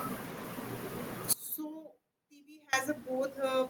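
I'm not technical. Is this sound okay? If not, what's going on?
No. There is an audio dropout to a faint residue. At 1.33 seconds the speech suddenly cuts out, and it comes back at 2.73 seconds, about 1.4 seconds later. During the gap you can still hear a faint trace of sound, far quieter than normal. It is not a natural pause or a fade, because the change is abrupt. The likely cause is a brief loss of the signal while the recording path stayed on.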